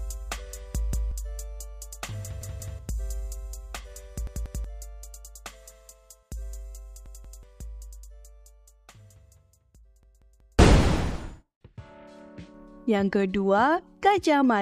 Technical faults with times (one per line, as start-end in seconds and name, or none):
0.93-1.11 repeated buffer
2.41-2.79 repeated buffer
4.27-4.64 repeated buffer
7.06-7.43 repeated buffer
10.03-10.59 repeated buffer